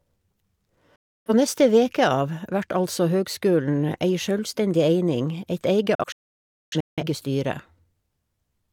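At 0.96 s the speech snaps to silence with a very fast fade of about 3 ms, and returns at 1.31 s on "neste veke av vert". After "eit eige", from 5.95 to 7.03 s, the sound breaks into several short holes, the longest about 0.6 s, with roughly 0.8 s missing in total. Both are digital broadcast dropouts: the receiver lost the signal or got corrupt frames, muted until clean frames arrived, and the audio in those gaps is gone.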